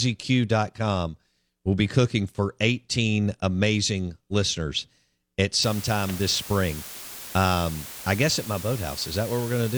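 From 5.63 s to the end of the speech, just after "amazing listeners at", the audio shows low bit depth with dither. It fits 6-bit samples. Dither turns the rounding error into steady white noise. A constant, even hiss sits about 15 dB below the signal.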